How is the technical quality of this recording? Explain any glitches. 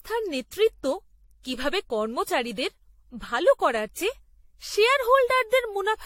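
The speech carries generation loss from start to finish, likely from several rounds of AAC re-encoding, each on a shifted frame grid, which stacks noise and spectral holes. It sounds swirly and hollow, with blurred consonant attacks and nothing above 16.5 kHz. That is more damage than one pass at a rate like 64 kbit/s would leave.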